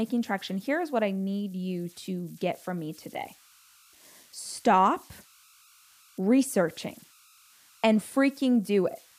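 A faint whistle near 1.5 kHz runs throughout, about 30 dB below the speech: converter idle tones from an undithered delta-sigma converter locking into repeating bit patterns.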